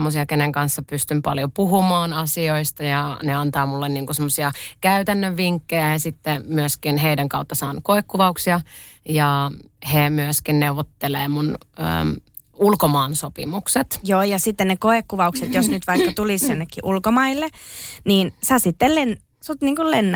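Nothing goes wrong technically in this bit of speech, and the Opus voice compression it went through is doing its job just as it should.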